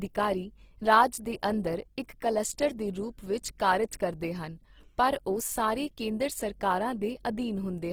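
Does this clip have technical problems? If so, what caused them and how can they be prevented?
Yes. Throughout the speech the sound is grainy and rough, with a noisy texture in the voiced parts, which points to Opus compression in its music (CELT) mode at a low rate, likely around 16 kbps. Each band's energy is kept, but with too few bits the fine detail is replaced with folded or noise-filled content. A spectrogram shows full bandwidth up to about 20.3 kHz, with speckled, smeared texture in place of clean harmonics. Encoding at a higher bitrate prevents this.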